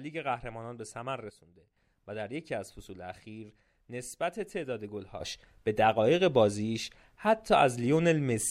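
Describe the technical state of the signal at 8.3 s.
At 8.3 s the signal sits inside a sudden gain jump that begins at 5.20 s and holds to the end of the clip. At that boundary the level steps up by about 10 dB from one sample to the next, with no fade, and the speech and the background noise rise together and stay raised. The likely cause is a digital gain setting or bit shift applied at once instead of being ramped in.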